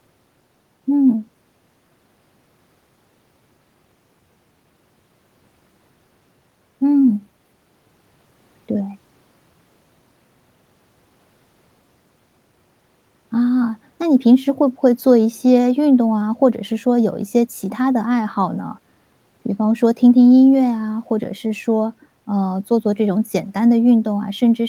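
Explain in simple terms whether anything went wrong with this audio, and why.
Nothing went wrong that I could hear: listening through the whole speech recording, nothing stood out as a problem.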